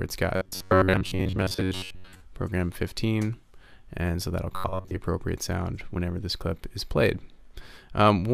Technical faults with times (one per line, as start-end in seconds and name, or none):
0.36-2.20 robotic sound from repeated short buffers
4.56-4.96 robotic sound from repeated short buffers